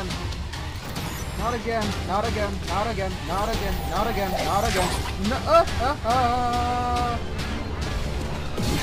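No technical faults can be heard anywhere in the signal, and nothing in the audio points to a problem in the capture or playback chain.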